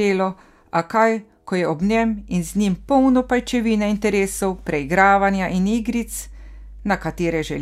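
A speech recording where, right after "kaj ko je ob" at about 1.82 s, a mains hum comes in and stays until the end at 7.6 s. It's a steady low tone at 50 Hz, sitting roughly 20 dB under the speech, droning along beneath everything. That's the power line bleeding into the signal, typically through a ground loop or a transformer near the cabling, and it switched on partway through rather than being there from the start.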